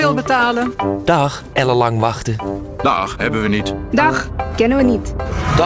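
No technical faults can be heard anywhere in the audio. It passes through a WebRTC call path that cuts off everything above about 8 kHz, which fits the G.722 wideband codec.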